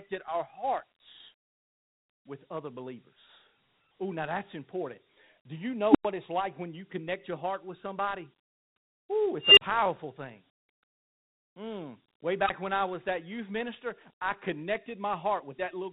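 The speech is encoded throughout as Dialogic VOX ADPCM. The 4-bit coding at 32 kbps, which fits 8,000 samples a second, cuts everything above about 3.9 kHz and leaves gritty hiss trailing the words.

An unstable filter's recursion runs away three times. At 5.90–6.05 s, after "you know", a tone around 300 Hz swells over 45 ms, then drops out for 100 ms before "it's like when you". At 9.42–9.61 s a tone around 3 kHz builds over 148 ms, followed by 40 ms of silence. At 12.41–12.50 s a squeal around 5 kHz climbs over 82 ms, then cuts out for 10 ms before "when I was that".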